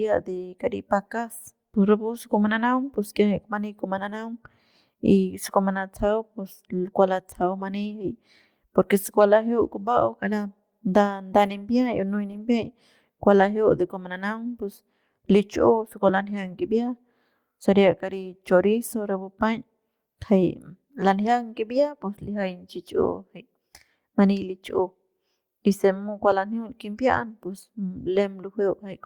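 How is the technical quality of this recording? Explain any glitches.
The speech has five brief rough patches from lost packets rebuilt from error correction: 11.45–11.51, 12.31–12.37, 13.39–13.41, 16.27–16.29 and 21.71–21.73 s. Each lost packet was replaced by a low-bitrate copy carried in the next one. Nothing drops out. The 40 ms and 20 ms stretches just sound grainier and noisier.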